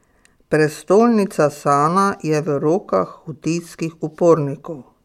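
A short speech recording, with no technical faults to report. Nothing heard in it points to a problem in how the sound was captured, processed or delivered.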